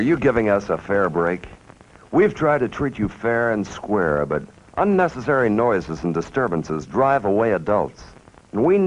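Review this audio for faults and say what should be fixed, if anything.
No faults found; nothing needs fixing.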